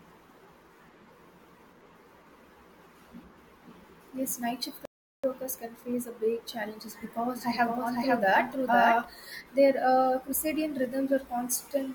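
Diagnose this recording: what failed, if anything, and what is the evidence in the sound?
The speech goes silent at 4.85 s, just after "night shift", for 0.38 s, then resumes with "workers can face a". This is a playback stall at the playback stage. The likely cause is the player's buffer running dry or its thread being blocked until output recovered.

From 7.35 s to 9.05 s, after "face a big challenges", a second full-band copy of the speech runs about half a second behind at roughly equal level. It has no room decay and starts and stops abruptly. This doubled audio track likely comes from the signal being captured again through a slower path and mixed in.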